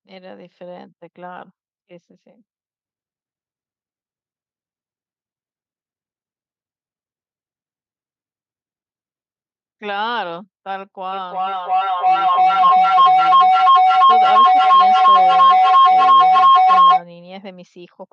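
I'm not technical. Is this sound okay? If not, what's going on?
No, there's a feedback howl from about 11.1 to 17.1 seconds. Two devices in the same room are likely picking each other up, so the sound loops round and grows louder each pass into a shrill whistle around 1 kHz, pulsing roughly three times a second.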